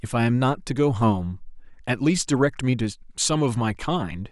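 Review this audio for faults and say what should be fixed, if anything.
Nothing to fix: no faults are audible anywhere in this speech recording.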